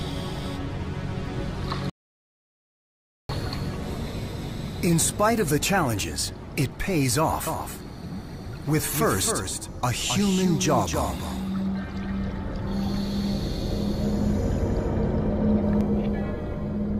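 At 1.90 s the sound just drops out to dead silence and doesn't come back until 3.29 s, so you lose about 1.4 s outright. That's an audio dropout to silence. There's no room tone or noise floor in the gap, only silence, which most likely means the input went away for a moment, through a loose connection, a link hiccup or an accidental mute, while the recorder kept writing. Whatever happened in that stretch is simply gone.

Then from 7.47 s to 15.81 s there's a doubled audio track. A second full-band copy of everything trails the original by around 300 ms, sitting roughly 5 dB down. It's dry, with no decay or room colour, so it reads as a clean, quieter repeat rather than an echo. It snaps in and out abruptly at both ends, which points to the likely cause being a second capture path or an edit that left two out-of-step copies overlapping.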